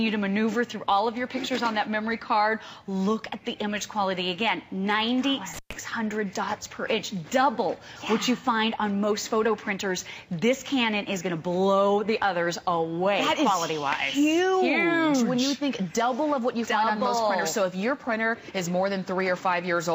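Around 5.54 to 5.73 s there's an intermittent contact, a loose plug or cable briefly opening, so the sound drops out for about 117 ms with crackle at both edges.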